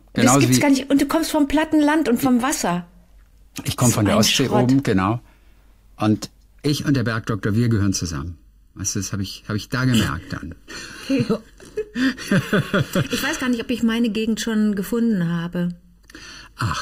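Channel delay (comb filtering) runs from 6.67 s to the end. One channel lags the other by roughly three quarters of a millisecond, and summing them to mono cancels evenly spaced frequencies from around 700 Hz upward, giving a hollow, phasey colour with fixed notches.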